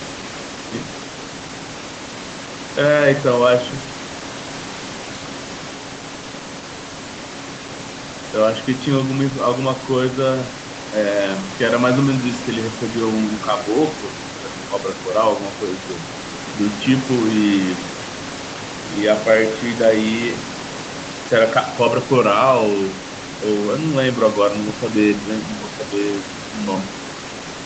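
The speech comes through a call path with no technical faults, its content ending around 8 kHz as the call codec's bandwidth limit allows and a room noise sitting about 15 dB below it.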